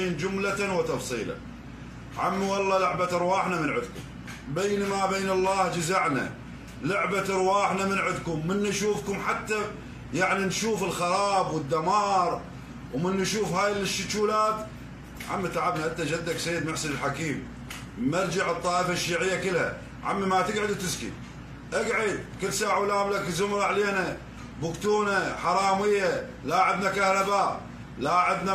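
Nothing here sounds wrong: the audio carries along steadily with no dropouts, glitches or other defects to point to at any moment.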